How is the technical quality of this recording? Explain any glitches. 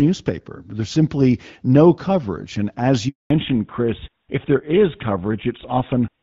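The recording has two linked glitches, both at the same point in the call. Before them, the speech has the clear, light coding of an AMR wideband (HD Voice) link, consistent with a rate around 12.65 kbit/s.

At 3.08 s there is a handover gap lasting 220 ms, ending at 3.30 s. The phone switched networks and no speech frames arrived meanwhile. The sound fades within a few tens of milliseconds and stays silent. Anything said then is lost.

From 3.30 s to the end there is a fallback to narrowband. The new link dropped to an older codec, and the sound fits GSM full rate at 13 kbit/s. Nothing above 4 kHz survives. The speech turns duller and rougher.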